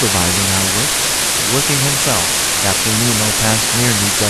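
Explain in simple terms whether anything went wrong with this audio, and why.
A steady, even hiss runs under the speech from start to finish, nearly as loud as the speech itself. This is low bit depth with dither: the sound was stored with only 3 bits, and added dither turns the coarse rounding into constant white noise instead of distortion.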